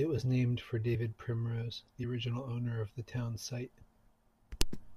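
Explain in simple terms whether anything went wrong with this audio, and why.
At 0.94 to 0.96 s the speech briefly skips ahead, because compressed frames were skipped: about 20 milliseconds of audio never got played.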